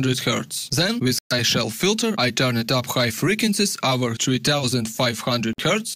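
At 1.19 s the audio drops out for about 120 ms, then again at 5.53 s for roughly 50 ms, each a clean gap to silence before it carries on. That's likely a Bluetooth stall: delayed packets let the headphone buffer run dry.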